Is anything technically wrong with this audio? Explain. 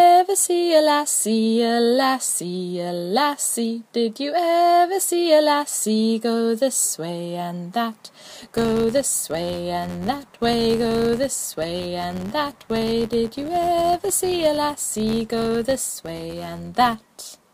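Yes. Filter restarted on every block, from 8.30 s to 17.54 s: the filter loses its memory at each block boundary and starts from zero, leaving a tiny transient per block. These form an 86.1 Hz buzz, which fits a 512-sample buffer, tracking the sound's level.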